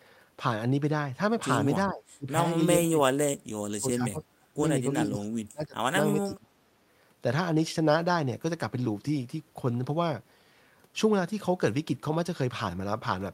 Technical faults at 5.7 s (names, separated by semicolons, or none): speech suppressed in double talk